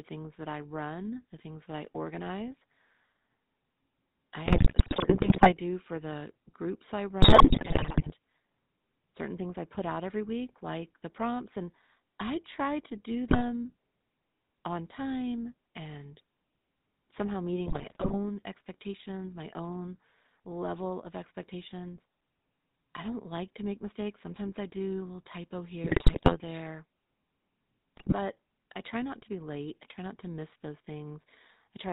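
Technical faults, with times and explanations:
Throughout: GSM full-rate codec. The speech is rebuilt from a vocal-tract model driven by regularly spaced pulses at 13 kbps, leaving a plainly audible buzzy, gravelly roughness. A spectrogram shows nothing above 4 kHz and coarse, smeared harmonics.
4.46–5.54 s, 7.22–8.12 s, 13.28–13.41 s (after "I try to do"), 17.66–18.18 s, 25.84–26.37 s (after "do a little typo"), 27.96–28.14 s (before "I try not to"): GSM bit errors. Corrupted filter, pitch and gain values at bit error rates of about 3.6 to 7.4 percent make the speech squawk, pop and gargle. They show as sudden level spikes in the waveform and distorted, blotchy spectral bands.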